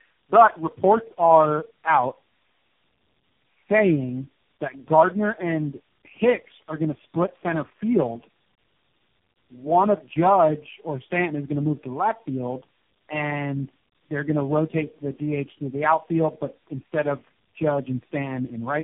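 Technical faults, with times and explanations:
Throughout: tandem speech coding. The speech passes through four speech codecs in turn, G.729A, AMR-NB and G.726 among them, each re-coding the last one's output. That compounds roughness, muffling and warble. A spectrogram shows nothing above 3.8 kHz and smeared, blotchy harmonics.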